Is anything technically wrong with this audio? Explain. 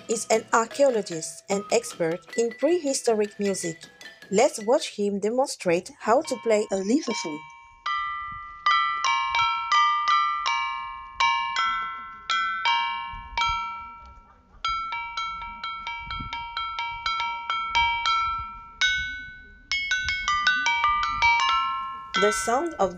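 No, nothing stood out as technically wrong on listening.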